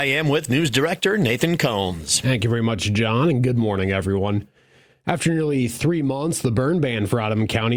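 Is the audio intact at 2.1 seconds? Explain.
Yes, the speech at 2.1 seconds is intact, with no audible dropout, click, distortion or other fault at that point.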